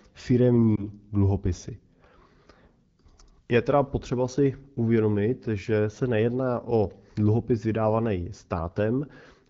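At 0.76 to 0.86 s, a lost AMR speech frame, consistent with one 20 ms frame, causes a brief dip or warble as the decoder reuses prior settings at falling gain.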